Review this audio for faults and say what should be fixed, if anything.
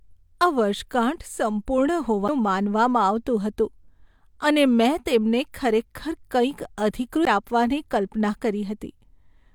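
The laser jumped to a different turn of the disc's spiral twice, a CD skip at 2.28 s and again at 7.25 s. Each time the player muted very briefly, leaving a tick, and the speech resumed from a different point on the disc. Prevent it by cleaning or replacing the disc and isolating the player from knocks and vibration.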